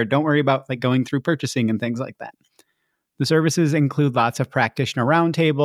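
Nothing stands out as a fault anywhere in this recording, so there's nothing to point to along the way.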